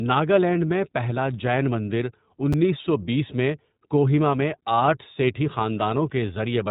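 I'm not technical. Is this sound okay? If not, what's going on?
No. Two things went wrong.

The recording passed through the iLBC codec, a phone-call compression system that squeezes the speech into small 20 ms slices and rebuilds each one separately. Everything above about 3.8 kHz is cut away, so the whole clip sounds muffled and phone-like, and the rebuilding leaves an audible rough, slightly artificial, buzzy edge on the speech from start to finish.

At about 2.53 s, just after "میں پہلا جین مندر" and before "سو بیس میں کوہیما", there are chunks out of order. A tiny piece of audio, about 6 ms long, was delivered one piece late and played after the piece meant to follow it. Nothing is missing, but the swapped pieces create hard joins, heard as a tiny jumbled stutter.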